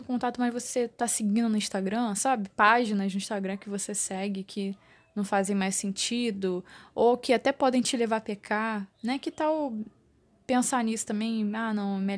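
Nothing in this recording trips any alarm, as there's no technical fault to point to anywhere along the way.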